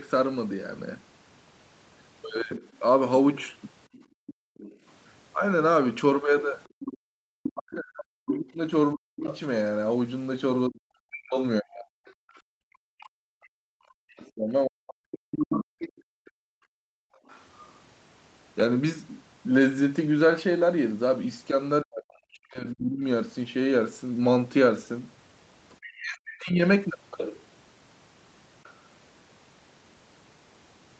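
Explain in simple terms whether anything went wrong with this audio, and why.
The call's echo canceller most likely got confused when both people talked at once, and turned down everything. This is speech suppressed in double talk: from 2.59 to 4.32 s, 7.53 to 15.94 s and 21.82 to 26.62 s, the speech dips sharply or cuts out in pieces.

The canceller also likely failed to fully remove the other person's voice, which the talker's loudspeaker was playing into the microphone. This is the other side's voice leaking through, as a fainter second voice from 3.92 to 17.68 s and briefly from 28.63 to 28.74 s.

While the loudspeaker was playing, the echo canceller also clamped the microphone down hard. This is background gated by the echo canceller: the room sound drops out briefly at 6.68 to 7.25 s, 12.3 to 12.52 s and 16.22 to 17.28 s, then comes back.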